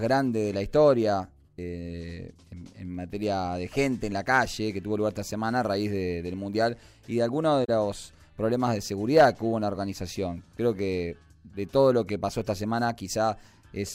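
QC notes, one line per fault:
7.64–7.69 s, AAC frame loss with muting: a short, soft-edged dropout about 43 ms long, which fits two consecutive AAC frames going missing. The decoder fills the missing frames with a zeroed spectrum, so the sound falls to silence. Because the transform windows overlap their neighbours, the level tapers down into the gap and swells back out of it over roughly a frame, leaving a smooth hole rather than a hard cut.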